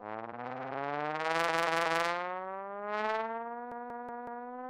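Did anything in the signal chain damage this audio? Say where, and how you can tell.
Yes, at the driver or buffer stage: a repeated buffer, where one roughly 186 ms block replays three times from 1.49 to 2.04 s and four times from 3.72 to 4.46 s, with hard joins, consistent with an 8192-sample buffer starved of fresh data.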